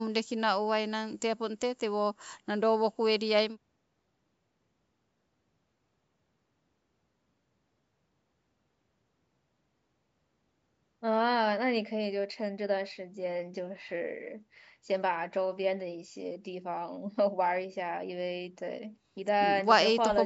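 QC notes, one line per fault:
Nothing to flag here; the speech has simply been through ordinary call microphone processing, which trims the lowest bass and leaves nothing above 8 kHz, just as it should.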